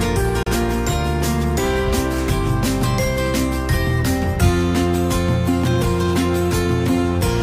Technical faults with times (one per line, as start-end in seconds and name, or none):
0.43-0.47 digital broadcast dropout